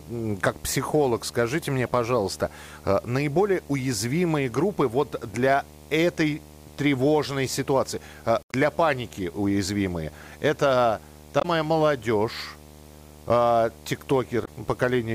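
A speech recording with video or display buzz throughout, a 75 Hz buzz with hash above it sitting roughly 25 dB below the speech; the 75 Hz rate matches a display's field rate, not 50 or 60 Hz mains hum. Damaged data in a compressed stream makes the decoder lose sync briefly, producing a short glitch at each point. These occur at 1.87–1.89 s between "как психолог скажите мне" and "пожалуйста э наиболее уязвимые", at 8.40–8.54 s after "для этой тревожной ситуации", at 11.37–11.45 s after "паники уязвимые это", and at 14.41–14.48 s.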